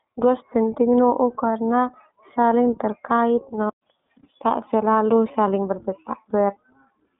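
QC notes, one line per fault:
Throughout, iLBC codec: the whole clip sits in a narrow phone band of roughly 200 Hz to 3.6 kHz, with nothing at all above 3.7 kHz, so the speech comes across boxy and dull. The codec damage is plainly audible as a rough, slightly synthetic edge. Each 20 ms frame's excitation is coded on its own without leaning on the previous one, which fits the 15.2 kbps mode and leaves that grainy texture.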